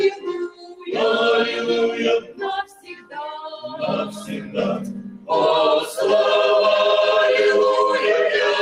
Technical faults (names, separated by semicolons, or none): noise suppressor applied to music or sounds; sound cut by the noise suppressor